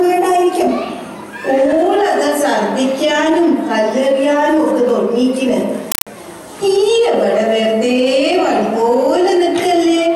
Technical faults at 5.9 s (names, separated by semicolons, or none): compressed stream played as audio